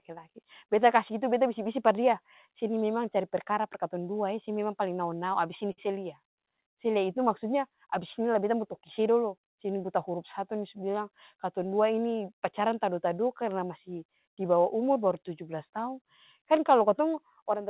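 At 5.72 s the speech hits a short stall from a late packet, lasting until about 5.94 s. A packet arrived after its playout time, the jitter buffer ran dry, and the receiver filled the gap by stretching the preceding sound for roughly 56 ms, then resumed exactly where it left off. No speech is lost; instead a syllable is held too long, with a faint buzz or slight dip, heard through the narrowband telephone-codec sound with nothing above 4 kHz.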